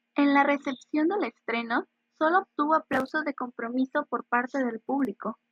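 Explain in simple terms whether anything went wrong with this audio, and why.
From 3.22 to 3.95 s the speech briefly plays about 6% faster and a semitone higher, then snaps back: likely a drift correction step.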